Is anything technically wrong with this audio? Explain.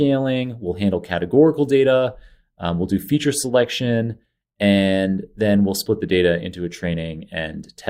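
No, nothing technically wrong can be heard anywhere in this speech recording.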